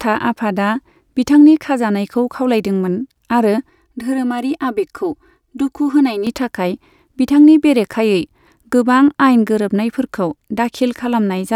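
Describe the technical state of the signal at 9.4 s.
At 9.4 s the speech signal is intact, with no audible fault at that moment.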